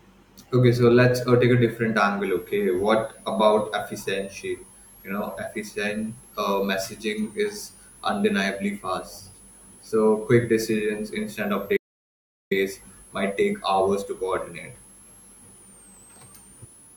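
From 2.24 s, just after "uh take a different", a switching supply whistle enters and stays to the end of the clip. It sits high, around 10 kHz, and sits well below the speech, roughly 30 dB down. Its pitch wanders between about 7.9 and 12.7 kHz. That drift separates it from fixed-frequency interference such as a CRT line whistle or mains hum, which hold one steady pitch. Here a power supply's switching rate is shifting with load.

At 11.77 s an audio dropout to silence cuts the sound for 0.74 s, until 12.51 s. The speech stops mid-flow and resumes abruptly. Whatever was said in between is lost. The gap is silent: no room tone, and even the whistle vanishes. A noise gate or suppressor would leave some residual floor and fade rather than cut. The likely cause is a momentary loss of the input, with the recorder writing silence meanwhile.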